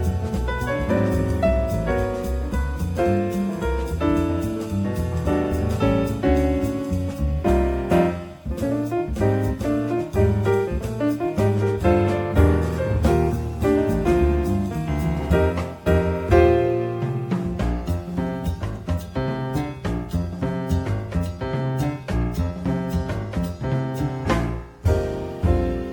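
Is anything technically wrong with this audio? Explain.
No, there's nothing technically wrong here that I can hear, so you're good to go with it as it is.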